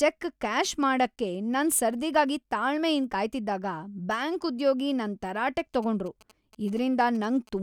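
From 5.59 to 7.49 s, GSM signalling bursts break in: a nearby 2G phone's radio pulses are rectified by the audio circuit, giving galloping ticks and short 217 Hz buzzes roughly 25 dB below the speech. A spectrogram shows clustered vertical striations with a 217 Hz harmonic comb; the waveform shows spiky bursts.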